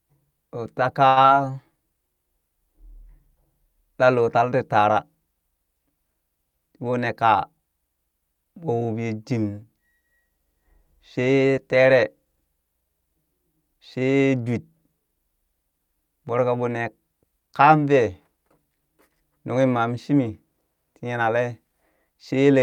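Speech, with three receive-side timing faults in the first eight seconds. At 1.07 to 1.18 s, right after "ɓoo ta", there is a short stall from a late packet. The jitter buffer ran dry, so the receiver held the last sound for about 91 ms until the data arrived, then resumed from the same point. Nothing is lost, but that sound is held too long, with a slight buzz or dip, and playout now runs 91 ms later than before. Immediately after, at 1.22 to 1.26 s, comes a short concealed packet loss. About 40 ms of audio never reached the decoder in time, and the receiver covered the gap with only about 15 ms of synthesized continuation before blending back into real signal. The result is a brief smear or wobble where a short segment drops out, and the net effect pulls playout delay back by roughly 30 ms. From 6.89 to 7.60 s there is a jitter buffer speed-up. The buffer was holding more audio than its target, so the receiver trimmed short pitch-period chunks repeatedly to shed the excess, around 70 ms in total. 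Over that stretch the speech plays at about 108% speed with unchanged pitch, which sounds hurried before normal pacing returns.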